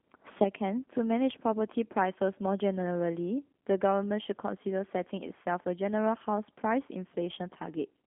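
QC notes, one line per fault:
Throughout, G.729 codec: the speech has been squeezed through a low-rate speech coder, consistent with G.729A at 8 kbit/s, which sends only a vocal tract filter, a pitch estimate and a few pulses per frame instead of the waveform itself. The result is telephone-band speech running from about 250 Hz to 3.5 kHz, with nothing above 3.7 kHz, and a plainly audible rough, synthetic edge.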